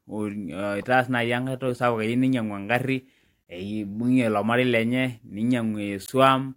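Short glitches cut into the speech at 0.82–0.84 s, just before "naa iniankae toki sapuk"; at 3.44–3.46 s, just before "eibung'e ilo marei lenye"; and at 6.06–6.09 s. Each is damaged data in a compressed stream: corrupt bytes throw the decoder out of sync until it finds the next frame header.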